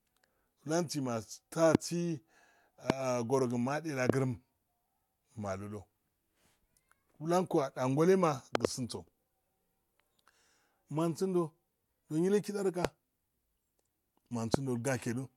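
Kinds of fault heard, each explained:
Loud pop: A sudden voltage spike lands on top of the speech, which carries on underneath. Sharp pops sit at 1.75, 2.90, 4.10, 12.85 and 14.54 s, each lasting about 20 ms. At 8.55 to 8.67 s, two pops come in quick succession. The peaks stand roughly 20 to 25 dB above the speech. They are likely from a plug, a switch, static or a driver glitch.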